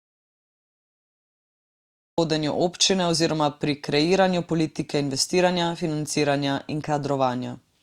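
Audio dropout to silence from the very start until 2.18 s: the clip opens in dead digital silence with no room tone, and the speech then cuts in abruptly at "občine oziroma pri kreiranju". The input was likely lost while the recorder kept writing zeros, so anything said there is gone.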